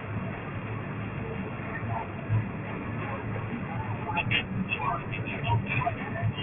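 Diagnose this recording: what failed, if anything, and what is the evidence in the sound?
Aliasing runs through the whole speech clip, a sample-rate conversion fault. Sibilants sound gritty and metallic, and energy piles hard against a 3 kHz ceiling. That fits unfiltered downsampling to about 6 kHz: content above 3 kHz folds back as unrelated tones, nearly as loud as the speech.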